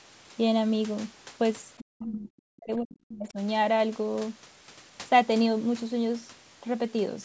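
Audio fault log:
1.79 to 3.38 s: speech suppressed in double talk, turned down by up to about 40 dB, likely an echo canceller ducking overlapping talk.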